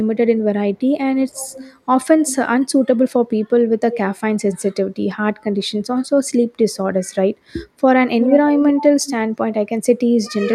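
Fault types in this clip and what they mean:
echo leak: Short repeats of the speech trail it by 308 ms in six brief scraps, varying in level, with the one near 8.21 s fairly strong. This is likely a loudspeaker-side echo canceller failing to remove all the speech its microphone picked up.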